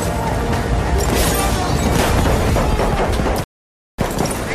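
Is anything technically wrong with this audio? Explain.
Yes, there's a rebuffering stall from 3.44 to 3.99 s. The audio just drops to dead silence for a bit over half a second, about 547 ms, then picks up exactly where it left off. The player ran dry on downloaded data and had to wait for more to arrive before carrying on. Nothing's missing or skipped, so you don't get a jump. It's just a gap that stretches the timeline by that half second.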